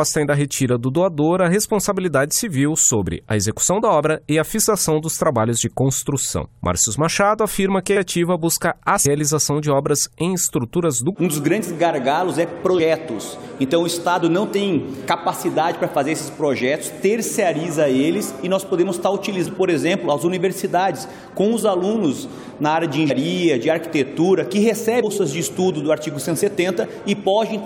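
Compressed frames are skipped at 4.63, 9.05, 11.13 and 25.02 s. At each point whole blocks of encoded audio never reach the output, so the sound jumps forward. Roughly a fifth of a second is lost at 4.63 s, about 0.7 s at 9.05 s, and about 0.4 s at both 11.13 and 25.02 s. The gaps fit a codec frame of about 23 ms.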